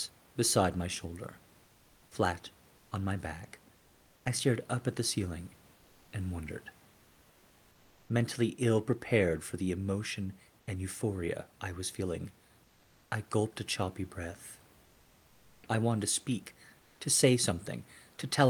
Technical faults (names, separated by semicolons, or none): comfort noise in place of the background; onset clipped by the voice detector